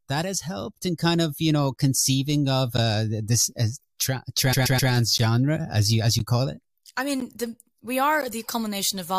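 At 2.77 s, just before "this as", there's a gap between chunks: a 12 ms hole at the join between one-second chunks.

From 4.52 to 4.91 s, repeated frames make a 128 ms block play three extra times, a stutter that adds 384 ms.

The same 12 ms gaps come back at 5.18, 6.19 (before "call it I"), 7.20 (before "the we") and 8.22 s.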